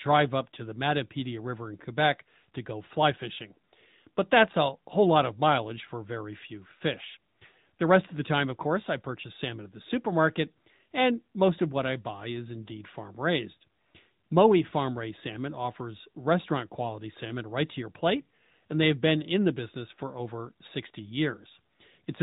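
AMR narrowband mobile codec damage runs throughout. Nothing passes above 3.8 kHz, and the buzzy, synthetic voice texture fits a bitrate around 10.2 kbps.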